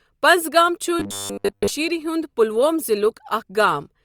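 From 1.0 to 1.7 s the speech turns into a rigid, metallic buzz pitched at 100 Hz that loosely tracks the words, and normal sound returns just before "ہُنٛد پلوۄم". This is robotic sound from repeated short buffers. It is likely caused by audio arriving too late, so that playback loops the last fragment of about 10 ms, a length that fits the 100 Hz buzz. Roughly 70% of the stretch is repeated material rather than real audio.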